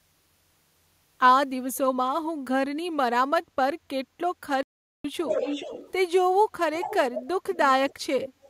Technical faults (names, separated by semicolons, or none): playback stall; echo leak